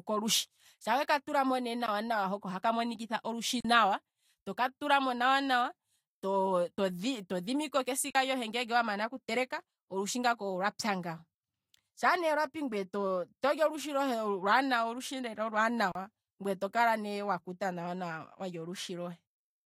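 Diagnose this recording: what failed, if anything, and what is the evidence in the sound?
The speech drops out abruptly five times, cutting off and back with no fade: just after "lushi shaa weka tulamo" at 1.86 s (18 ms), after "monikitha olushi" at 3.60 to 3.65 s (41 ms), at 6.77 s (12 ms, a tick or dip), at 8.10 to 8.15 s (46 ms), and at 15.92 to 15.95 s (35 ms), just before "ngweye tokala ne wakuta". These are blocks of digital silence at the driver or buffer stage. The 12 ms and 46 ms gaps fit 512-sample and 2048-sample buffers, which points to output buffers not being filled in time.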